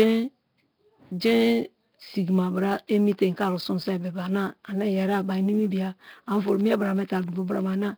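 Nellymoser compression, throughout: the speech is heavily degraded, with a rough, hissy, underwater smear and nothing above 5.3 kHz, likely from Nellymoser Asao coding at around 22 kbps.

Sample clock jitter, throughout: an unstable converter clock samples slightly early or late, adding roughness about 30 dB below the speech that grows on loud, high, steep-sloped sounds.

Periodic USB or driver dropouts, 5.86 to 7.73 s: every 0.125 s, around fifteen times, a tiny slice of well under a millisecond drops to silence, giving regular ticks.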